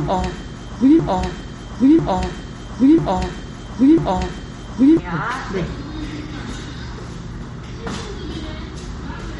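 From the very start, a broken-record loop is already running: a one-second fragment repeats four times until 4.99 s, likely a stalled stream resending its last buffer, so the real audio there is lost. Throughout, there's plainly audible MP3 compression, with nothing above 11.1 kHz and a watery, swirly texture that fits a low bitrate around 45 kbps, likely from encoding.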